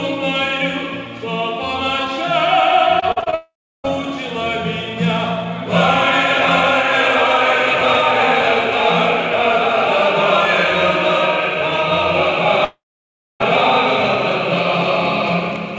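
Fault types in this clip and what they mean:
Repeated packet loss (robotic sound): Audio packets failed to arrive several times in quick succession, and each hole was patched by stretching the preceding sound forward. Between 3.00 and 3.34 s there are six such gaps, the longest 40 ms, and about a third of that span is synthetic fill. The sound turns choppy, with short pieces of the original missing, and it leads directly into the first dropout.
Long network dropout: Both stretches sound like a likely network outage in which nothing reached the receiver for well over a few packets. The concealment carries the last sound forward as a decaying buzz or hiss, which gives way to silence. From 3.34 to 3.86 s about half a second is lost, with roughly a third of a second of silence. From 12.64 to 13.42 s about 0.76 s is lost, most of it silent, before the audio resumes past the missing part.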